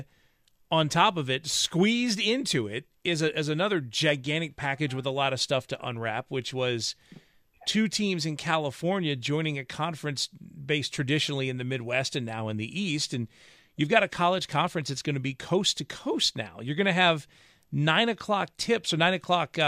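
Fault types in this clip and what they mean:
No technical faults can be heard in this speech recording.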